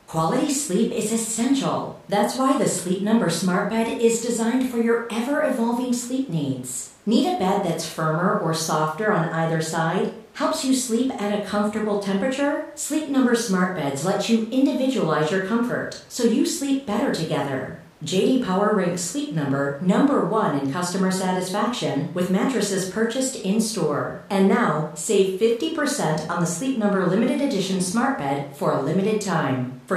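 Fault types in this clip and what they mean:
Nothing stood out on listening to the recording; no faults could be heard.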